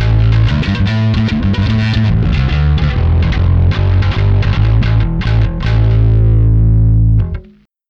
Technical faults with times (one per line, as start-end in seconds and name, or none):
2.40-5.25 channel delay (comb filtering)